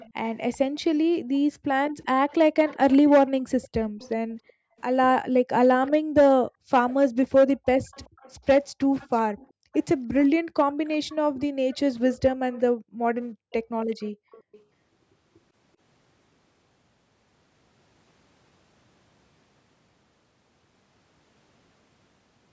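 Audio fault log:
0.0–0.58 s, 1.9–4.82 s, 5.86–5.91 s, 6.9–14.61 s: echo leak. A faint copy of the speech trails it by 384 ms, around 25 dB down (closer to 20 dB in the brief 5.86 s scrap). It is likely loudspeaker sound that got past the far end's echo canceller. On a spectrogram it appears as weak, time-shifted repeats of the speech harmonics.
1.21–1.88 s, 4.3–6.7 s, 9.47–9.72 s, 11.25–13.13 s: background gated by the echo canceller. The room tone drops by about 40 dB, for roughly 0.3 s to a second at a time, while the canceller clamps the microphone, then returns once it releases. On a spectrogram the noise floor goes blank. The waveform shows flat gaps between bursts of sound.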